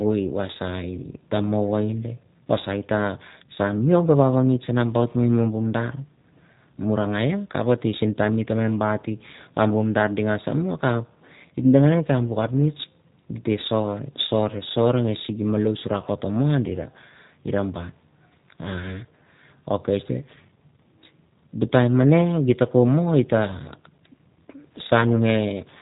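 From start to finish the speech carries G.729 codec damage, and it is plainly audible: the speech sounds slightly rough and synthetic. The codec does not store the waveform. It rebuilds each short frame from a vocal tract filter, a pitch predictor and a few pulses, and the rough texture fits its 8 kbit/s budget. On a spectrogram, energy stops sharply near 3.8 kHz, leaving empty space above, and harmonics look smeared and slightly blocky.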